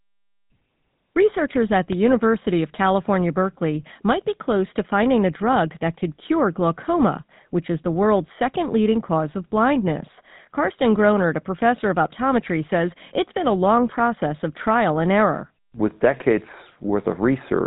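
From start to finish, the speech has passed through a GSM full-rate codec, and the damage is plainly audible. The codec rebuilds the voice from a vocal-tract filter excited by a sparse, evenly spaced pulse train, so the fine structure of the original excitation is lost. The result is a buzzy, gravelly roughness across the whole clip, with nothing present above 4 kHz. That coarse quality fits a rate of about 13 kbps.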